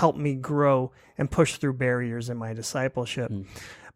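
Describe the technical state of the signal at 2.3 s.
Nothing is wrong at 2.3 s: the speech signal there is intact, with no audible fault.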